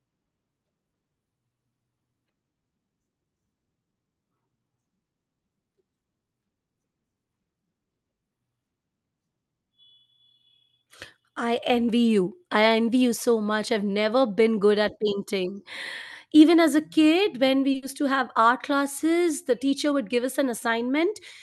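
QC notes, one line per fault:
17.71–17.76 s, short stall from a late packet: after "a kid when we", a packet arrives late. The last sound is held about 30 ms. Nothing is lost.
17.76–17.84 s, burst of packet loss: about 60 ms never arrives. The receiver continues the last sound and fades it down, then jumps ahead to "to have art classes".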